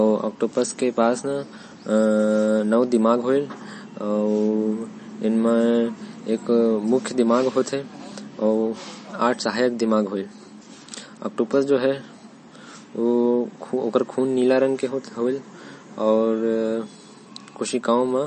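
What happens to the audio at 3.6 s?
At 3.6 s the speech carries MP3 compression damage that runs through the whole clip. Nothing sounds above 8.3 kHz, and weak frequency lines flicker between frames, giving a watery swirl, likely from starved low-bitrate encoding near 33 kbps. That swirl marks it apart from a plain low-pass filter.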